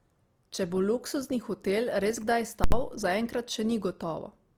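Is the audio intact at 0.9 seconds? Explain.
No. At 0.9 s, as throughout the clip, this is low-bitrate audio saved at a high bitrate: the sound carries the artefacts of a likely low-bitrate Opus pass, which the later high-bitrate MP3 cannot undo. A spectrogram shows those artefacts, with nothing above 20.1 kHz.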